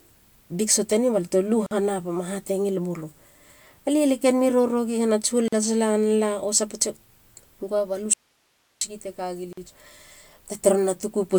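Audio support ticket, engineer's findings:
Gap at a join of encoded pieces at 1.66–1.71 s (47 ms), 5.48–5.53 s (44 ms), 9.53–9.57 s (45 ms). Short silent holes in running speech, edges smeared, speech resumes where it stopped. Separately encoded segments concatenated untrimmed; encoder start delay plus final-frame padding left in.

Audio dropout to a faint residue at 8.13–8.81 s (679 ms). Speech cuts abruptly to hiss only, roughly 45 dB under the signal, then returns mid-flow. Likely an upstream source loss while the downstream chain stayed live and passed its own noise floor.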